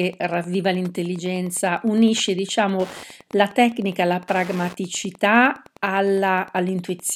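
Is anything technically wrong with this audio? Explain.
Yes. Wi-Fi interference runs throughout the speech. A nearby radio's beacons, every 102.4 ms, get rectified, giving steady ticking roughly 25 dB below the voice.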